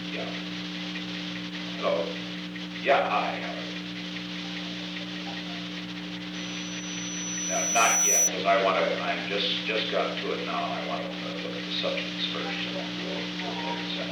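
A microphone is picking up the loudspeaker it feeds, and at 5.9 kHz the loop gain exceeds one, causing loudspeaker feedback squeal: from 6.34 s to 8.32 s a single piercing tone swells over roughly two seconds until it sits around ten decibels above the audio.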